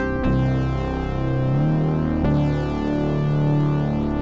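Nothing here stands out as a fault; the sound has come through a call connection and has nothing above about 8 kHz, which fits a wideband call codec working as it should.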